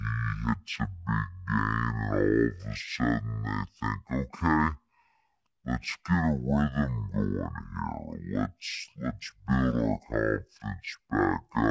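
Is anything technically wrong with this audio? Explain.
Yes. The speech is affected by a wrong sample rate throughout. The audio runs at half speed and an octave low, which fits material recorded at 32 kHz being played back at 16 kHz with no conversion. Because speed and pitch shift together, the voice sounds slow, deep and drawn out. On a spectrogram, every harmonic and formant sits at half its normal frequency, with the upper content squeezed downward. On a waveform, syllables and pauses stretch to twice their natural length.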